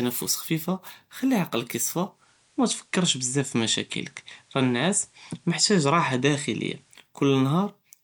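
A speech clip in which, after "חפיפה חלילי עקלכ יספה" at 2.09 s, the receiver loses its digital signal and blends to analogue FM. A 0.18 s cross-fade brings in faint hiss roughly 40 dB down and shifts the level by about 1 dB until it returns at 7.08 s.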